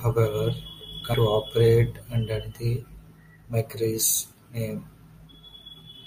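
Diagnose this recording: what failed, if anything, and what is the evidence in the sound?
A brief tick and near-silence of a few milliseconds at 1.14 s, then the speech resumes from elsewhere: a CD skip, the playback laser jumping to another track turn.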